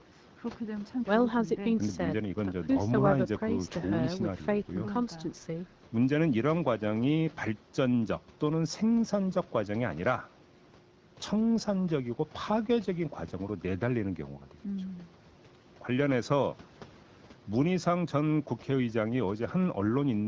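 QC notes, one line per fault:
No faults heard; speech passes through the HD Voice call path.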